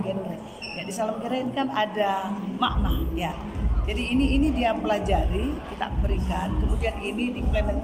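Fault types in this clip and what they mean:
Clock drift between sender and receiver: The sending device's audio clock runs roughly four percent faster than the receiving end's, so samples arrive faster than they are played out and the jitter buffer keeps filling. The receiver has to throw small pieces away to keep latency in check. On a waveform this leaves no single obvious break. Instead, small discontinuities are scattered across the whole clip, and a spectrogram shows faint vertical seams where the signal has been spliced.
Repeated timing corrections: From 0.29 s to 7.83 s the receiver keeps trimming short slices out of the stream, which plays the material back at about 103% of its natural pace. The cuts all go the same way but come at uneven intervals. Each one is slight. A waveform shows occasional abrupt joins, and a spectrogram shows brief vertical ticks where partials jump at the splice points.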